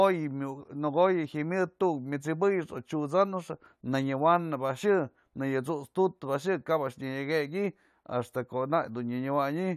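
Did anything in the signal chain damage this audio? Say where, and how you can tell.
No, nothing in this speech recording stood out on listening as a sign of damage from any stage of the signal chain.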